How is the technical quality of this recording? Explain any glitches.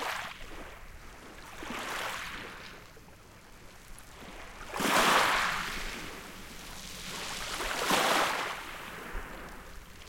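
The audio comes through intact, with no dropouts, distortion, noise bursts or other glitches at any point.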